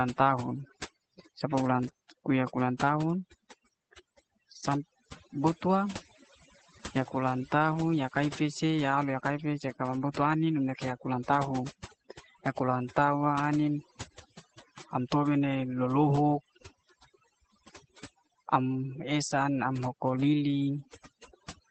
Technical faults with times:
0.00-21.71 overdone noise removal
0.00-21.71 Opus voice compression

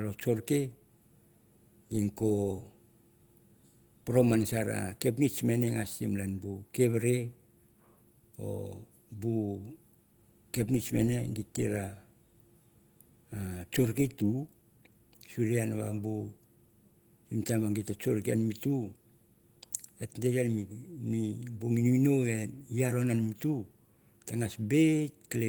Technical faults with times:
none

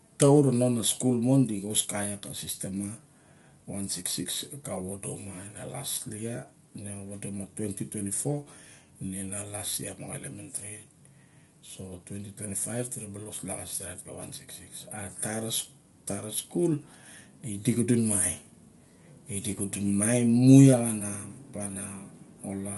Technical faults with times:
0.00-22.78 low-delay AAC compression

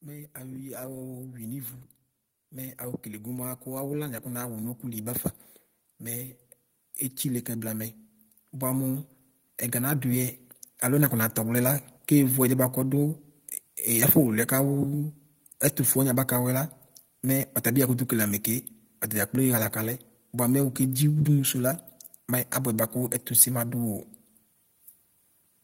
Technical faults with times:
0.05-5.27 automatic gain rising

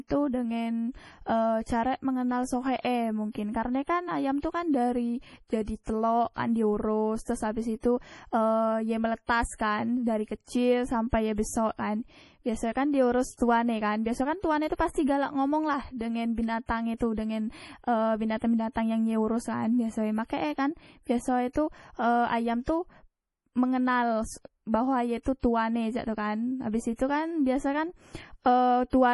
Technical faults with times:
0.00-29.14 MP3 compression
13.34-13.39 pre-echo
14.91-14.95 pre-echo

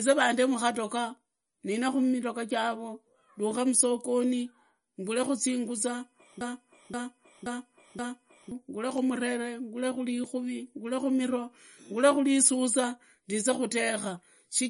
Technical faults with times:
0.00-14.69 MP3 compression
6.41-8.52 broken-record loop

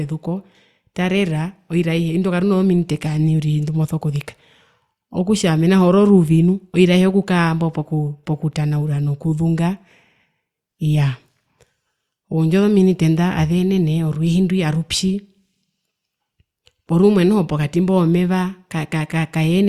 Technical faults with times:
none

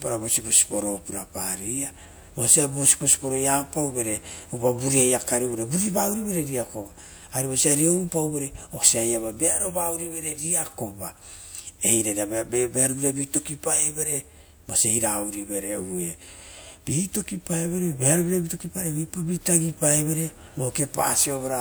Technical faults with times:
none

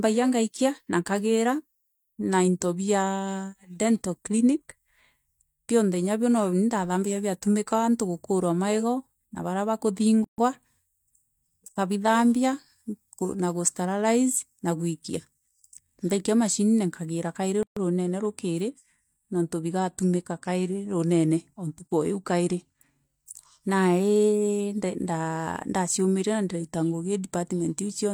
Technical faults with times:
10.24-10.38 gap at a join of encoded pieces
17.63-17.77 gap at a join of encoded pieces

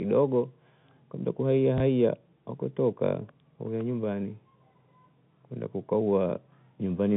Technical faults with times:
1.78-1.80 packet loss with last packet repeated

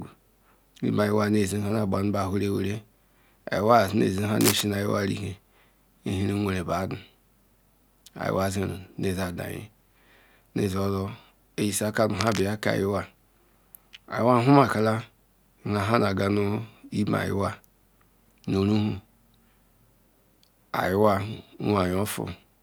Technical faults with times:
4.41-4.61 cable scratch noise
12.19-12.48 cable scratch noise

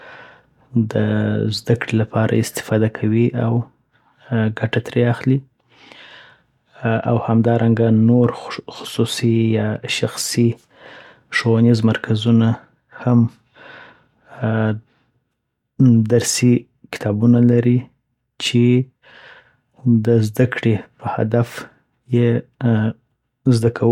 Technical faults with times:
none

